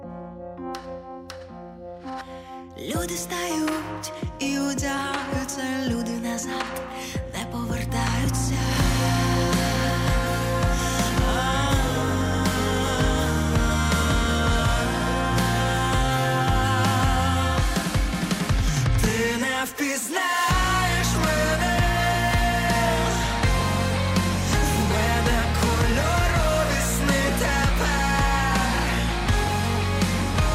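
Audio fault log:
No audible faults detected.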